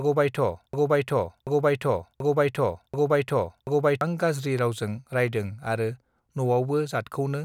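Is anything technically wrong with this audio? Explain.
Yes. A broken-record loop runs from the start of the clip to about 4.01 s. It is already under way when the audio begins. A fragment of about 0.73 s of speech repeats exactly, back to back, four times. The likely cause is a stall in the player, encoder or stream, which kept resending the last piece it held. The speech that belonged in that span is lost. Normal playback resumes at "गज्रि रावजों रायदों".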